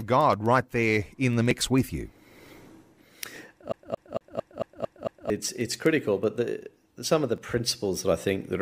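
Speech, with a dropped buffer (overrun) at 1.51 s, 3.36 s and 7.38 s, each heard as a sudden skip forward in the sound with no gap of silence. The likely cause is the recording program failing to collect its samples before the hardware overwrote them, so that stretch is lost and the audio on either side is butted together. About 10 ms goes missing at the first two points and about 30 ms at 7.38 s. A CD stuck on one turn runs from 3.72 s to 5.3 s. The same 226 ms fragment plays seven times in a fast, even stutter, with a brief mute at each jump. This is the pattern of a scratch knocking the laser back one track at the same spot on every rotation of the disc, so playback keeps returning to one short piece of audio.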